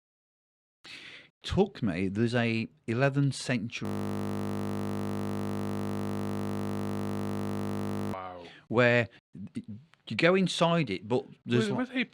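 From 3.85 to 8.13 s a system hang loop repeats one 20 ms slice of speech, giving a steady 50 Hz buzz; the spectrogram shows evenly spaced harmonic stripes. At 9.16 to 9.19 s, compressed frames are skipped, jumping ahead roughly 70 ms, which fits a 10 ms frame length. It makes a brief glitch at the join, seen as a waveform discontinuity.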